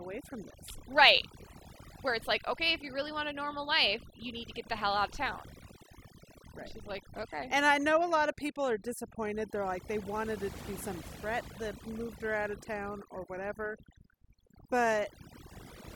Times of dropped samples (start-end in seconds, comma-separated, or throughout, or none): none